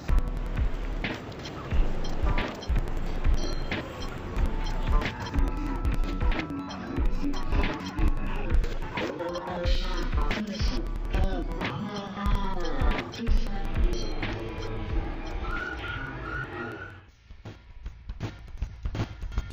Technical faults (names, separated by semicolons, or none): interleaved audio read as planar